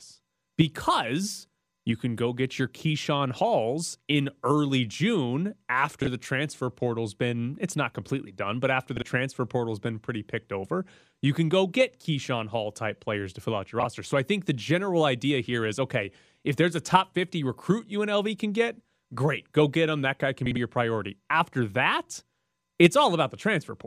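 Speech clip with four brief frames out of order glitches, at 6.02 s (before "the transfer portal's been"), 8.97 s (after "completely done but after"), 13.80 s and 20.46–20.57 s (before "your priority"). Neighbouring frames swap places, so each stretch flutters. Blocks are about 26 ms, which fits MP3-sized frames, and two frames per side in the last one.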